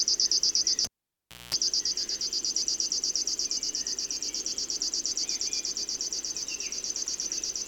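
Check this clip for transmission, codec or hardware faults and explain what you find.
One hardware fault: a cable pulled and plugged in, from 0.85 to 1.55 s. A live lead was disconnected and reinserted, giving a pop, about 650 ms of near silence, a 210 ms burst of 60 Hz mains buzz while only the tip touched, then a second pop.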